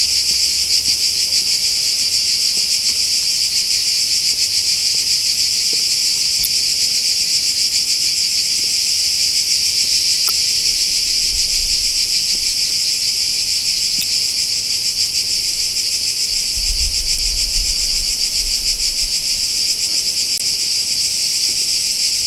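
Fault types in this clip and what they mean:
Damaged data in a compressed stream: parts of the coded stream got mangled, so the decoder misreads those frames, loses sync and hunts for the next header. You hear five brief blips of about 40 ms each, at 6.42, 10.26, 13.99, 17.15 and 20.37 s.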